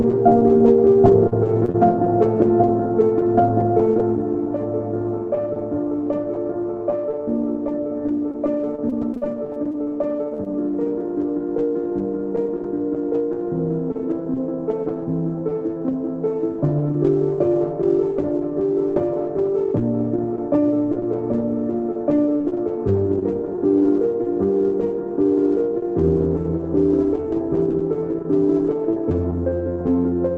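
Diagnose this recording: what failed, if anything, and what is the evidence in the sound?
The failure is on the network side of the call path, in two patterns. Repeated packet loss (robotic sound) occurs from 1.01 to 1.76 s and again from 8.32 to 10.48 s. The first stretch has 4 holes totalling 80 ms, the longest 22 ms. The second has 10 holes totalling 240 ms, the longest 42 ms. About 11% of each stretch is concealed. The receiver fills each hole by stretching the last sound, and the next hole arrives almost at once. Because the patches pile up, the result is a choppy texture with pieces missing rather than isolated blips.

Scattered short gaps appear from 22.12 to 23.86 s, again a network-stage loss of packets. There are roughly seven holes totalling 120 ms, none longer than about 20 ms, and roughly 7% of the span is concealed. Each hole is patched the same way, but they are spread out, so clear sound separates brief ticks, smears and hiccups. 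A driver or buffer underrun would differ because it leaves hard silences or clicks instead of these smeared concealments. The band-limited tone throughout fits an Opus call codec with its top near 8 kHz.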